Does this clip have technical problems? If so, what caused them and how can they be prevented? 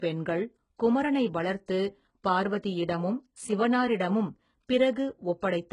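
Yes. Throughout the speech there is heavy HE-AAC compression damage, most likely from encoding at a very low rate, which fits roughly 12 kbps. The treble is bright but synthetic: the codec kept only the lower band and rebuilt the top by copying it upward, so s sounds turn gritty and metallic and stop dead at 11.1 kHz. A plain low-pass would sound dull instead. Prevent it by encoding at a higher bitrate.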